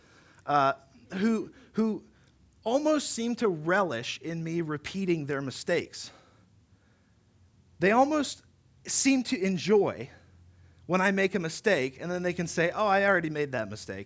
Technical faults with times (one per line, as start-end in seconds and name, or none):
11.24-14.05 resampler restarted on every block